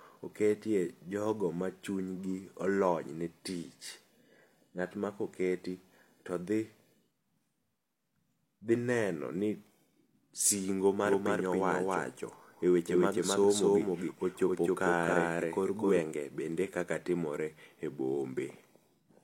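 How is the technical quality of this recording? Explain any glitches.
There's one clear glitch in this speech recording. From 11.06 to 16.00 s you get a doubled audio track: a second copy, about as loud as the original, trails it by roughly a third of a second. That's likely a slower second capture path or an edit leaving two copies out of step. It sounds like a dry, flat echo with no room tail, and it switches on and off abruptly.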